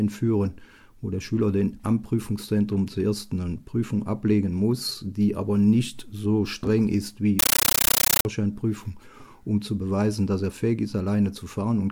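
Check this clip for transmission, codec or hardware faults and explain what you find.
One fault is present. From 7.39 to 8.25 s, a chattering static replaces the sound, pulsing 31.25 times a second in 13.3 ms bursts. This is a compressed stream played as audio: the pattern points to an undecoded AC-3 (Dolby Digital) bitstream on the digital link being read as ordinary samples, each frame's data a noise burst followed by padding.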